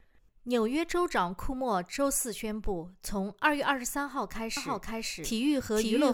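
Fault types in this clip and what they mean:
Doubled audio track: from 4.57 s to the end, a second full-band copy of the sound, about as loud as the first, runs roughly half a second behind, likely from a slower capture path or an edit holding two copies. Unlike an echo, it starts abruptly and never decays or adds room colour.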